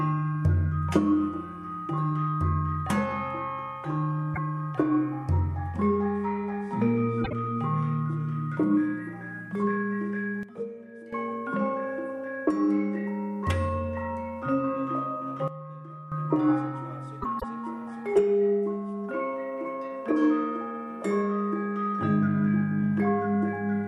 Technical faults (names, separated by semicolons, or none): sudden gain jump